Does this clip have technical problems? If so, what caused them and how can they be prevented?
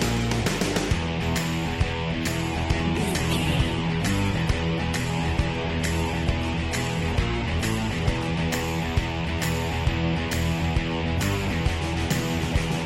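Yes. From 2.32 to 8.32 s the adaptive stream drops to a lower bitrate: the top end suddenly vanishes above about 12.1 kHz and codec artefacts thicken, with no gap, consistent with the stream falling from roughly 64 to 16 kbit/s Opus while the connection sagged. A bigger playback buffer or a higher minimum bitrate floor would keep this from happening.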